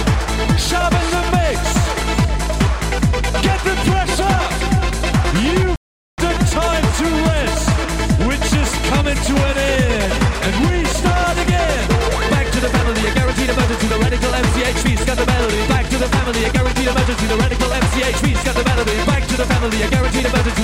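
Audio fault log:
5.76–6.18 s, playback stall: The sound stops dead in mid-flow and the output goes fully silent for about 0.42 s. There is no fade in or out. The gap is far too long to be a dropout of a few samples. The likely cause is that the player ran short of data or its playback thread was held up. No output was produced until it caught up. The sound then resumes at 6.18 s.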